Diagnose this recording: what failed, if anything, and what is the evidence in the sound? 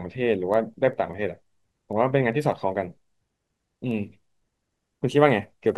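Word clock ticks run through the speech from 0.14 s to 5.70 s, around thirty sharp clicks of uneven strength, spaced roughly a fifth of a second apart. The failure sits at the digital interface: the receiving converter free-runs on its own clock instead of locking to the sender's. The two clocks drift apart by something on the order of 100 ppm, and each time they slip past each other a single sample is dropped or repeated, which produces the steady tick.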